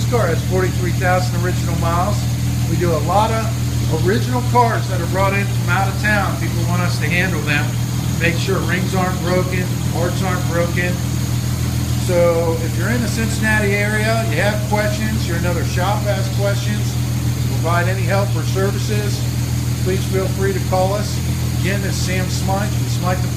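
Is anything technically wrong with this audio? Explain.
Yes. At 3.81 s and again at 12.46 s the audio lurches forward abruptly, with a brief blemish at each join where a small piece of the sound is simply missing. These are compressed frames skipped: whole frames were never played, either because they were absent from the file or because the decoder rejected them as damaged. The jumps fit 10 ms frames, roughly four at the first point (around 40 ms lost) and about three at the second (around 30 ms).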